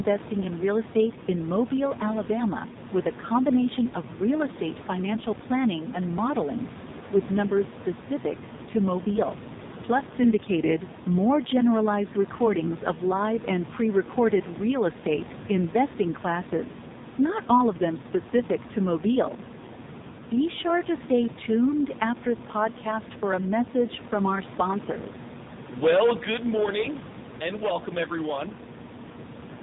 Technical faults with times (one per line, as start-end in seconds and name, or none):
0.00-29.62 AMR narrowband mobile codec